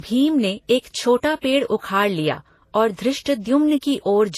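Transcoding between lossy codecs runs throughout the speech: nothing is present above about 14.2 kHz, and two kinds of coding damage sit on top of each other. The smeared, swirly texture fits a low-bitrate MP3 near 48 kbit/s, likely re-encoded to Vorbis at around 31 kbit/s. The second encoder spends its scarce bits on the first one's artefacts and adds its own warbling, so both layers of distortion are heard together.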